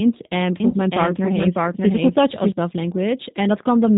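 Throughout, the speech sounds band-limited, slightly rough and synthetic, with plainly audible G.729 codec damage: an 8 kbit/s model rebuilds the voice and nothing above 4 kHz survives.

From 0.6 to 2.52 s a second, equally loud copy of the speech trails about 0.7 s behind and starts and stops abruptly. This doubled audio track is likely from the same signal arriving twice.

At 0.71 to 0.74 s the sound briefly smears into a fading buzz or coloured noise as the decoder conceals 20 ms of packet loss, which fits a single lost packet.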